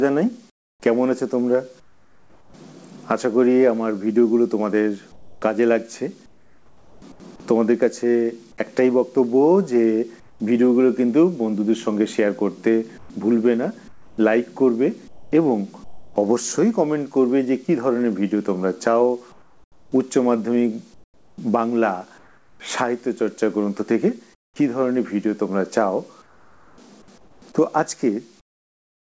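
From 0.5 to 2.54 s, 5.12 to 7.2 s, 10.2 to 10.4 s, 12.98 to 16.16 s, 19.32 to 22.6 s, 24.34 to 24.56 s and 26.22 s to the end, the gaps carry comfort noise in place of the background, likely from discontinuous transmission. The real background is swapped for a steady, featureless hiss, about 6 dB quieter at 10.2 s and about 18 dB quieter at 24.34 s. On a spectrogram these stretches look smooth and uniform, without the fine texture of the surrounding background, and they stop at the same 8 kHz ceiling that the G.722 call path puts on everything.

At 15.84 to 16.16 s comes sound dropped by the voice detector. Roughly 140 ms of the actual sound in that gap was likely mistaken for background and replaced by the same flat noise. The waveform shows a low, even band where that sound should be, and the sound only returns once the detector fires again.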